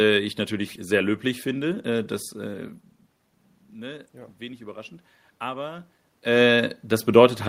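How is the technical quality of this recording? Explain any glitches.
One fault stands out: automatic gain rising. The input level drops by about 17 dB, and from 3.73 s to 5.92 s the gain control treats this as too quiet. It slowly adds about 3 dB. The voice and the room noise swell up together over about two seconds.

The level changes around 2.5 s and around 6 s come from the talker moving relative to the microphone. The steady background is room noise.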